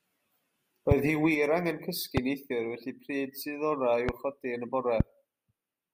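A speech recording with four loud pops, at 0.91–0.94, 2.17–2.20, 4.09–4.11 and 5.00–5.03 s. Each is a single sharp pulse, roughly 20 dB above the speech, which continues underneath. The likely cause is a voltage spike from a switch, connector, static or driver glitch.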